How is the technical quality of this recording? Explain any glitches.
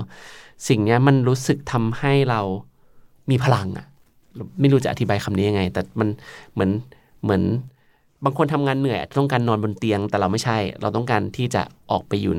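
No glitches or faults detected.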